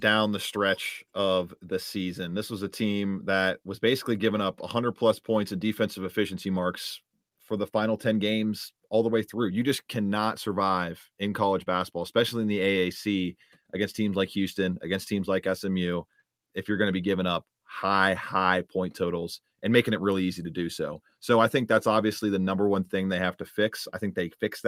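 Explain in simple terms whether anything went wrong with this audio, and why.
Nothing stood out on listening to this recording of speech; no moment sounded broken, interrupted or out of place.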